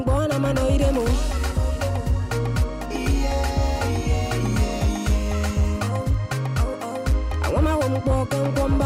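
From 0.43 s to 4.84 s a steady mains hum sits under the audio: a low tone at 50 Hz with some of its lower harmonics, only about 10 dB below the main signal, so it is clearly audible. Power-line current is getting into the signal path, through a ground loop between connected equipment or by induction from a nearby transformer. The hum starts and stops at those times.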